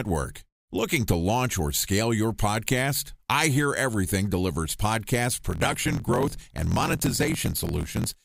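Speech clip. From 5.49 to 8.08 s, right after "delivers podcast", there's a block size mismatch (truncated): block ends get dropped, so you hear a 43.1 Hz buzz and 1.12x faster speech, which fits 1024-sample reads.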